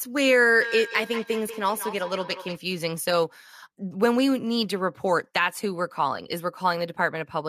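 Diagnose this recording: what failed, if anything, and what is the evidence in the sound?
The failure is a feedback echo between two devices, at the call-processing stage. From 0.61 to 2.61 s the speech returns at intervals of about a fifth of a second, peaking about 10 dB below the direct sound. A second device replays the audio, the microphone recaptures it, and the local echo canceller cannot remove it.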